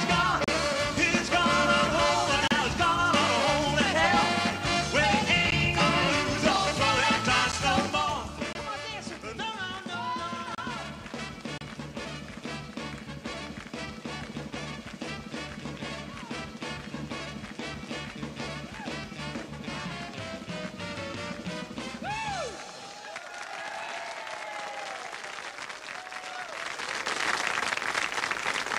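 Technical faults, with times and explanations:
0.44–0.48, 2.48–2.51, 5.51, 7.52, 8.53–8.55, 10.55–10.58 and 11.58–11.61 s, gap between stream segments: Hard-edged silent holes of 12 to 35 ms fall at 1-second segment boundaries, where timestamps leave gaps that the player fills with silence.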